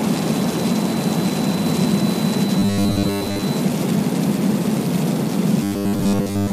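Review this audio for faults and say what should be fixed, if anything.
From 2.59 to 3.42 s and from 5.63 to 6.52 s the sound becomes a rigid 100 Hz buzz, robotic sound from repeated short buffers, likely from a 10 ms block replayed over most of the stretch while fresh audio was skipped. Preventing it requires steadier upstream delivery or a larger playback buffer.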